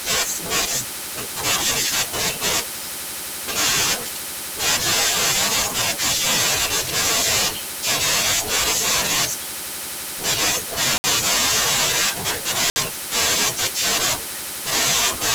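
A block of digital silence hits the speech at 10.98 s and again at 12.70 s, each lasting 60 ms. The sound cuts out and returns without any fade, so each gap is heard as a short hole.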